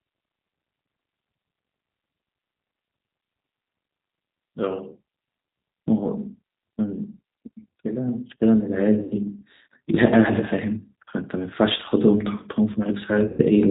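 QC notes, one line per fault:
Throughout: G.729 codec. The speech is band-limited, with nothing above 4 kHz. It has a rough, slightly synthetic quality because each 10 ms frame is rebuilt from a vocal tract filter, a pitch predictor and a few pulses. This fits G.729A at around 8 kbit/s.
7.82–9.31 s: automatic gain rising. The level climbs by about 5 dB over roughly one and a half seconds, with voice and background swelling together. The gain control judged the input too quiet and raised its gain step by step.
9.03–9.14 s and 13.27–13.43 s: VoIP packet loss concealed by the speech codec. About 80 ms and then about 120 ms of audio are missing, which suggests four and then six lost packets. The decoder extends the last pitch and filter into a fading buzzy tone or coloured noise, and the voice stays weakened briefly afterward.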